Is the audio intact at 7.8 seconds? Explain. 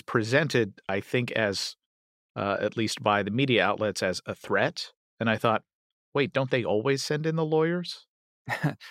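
Yes, at 7.8 seconds the speech plays through intact, with no audible fault at that moment.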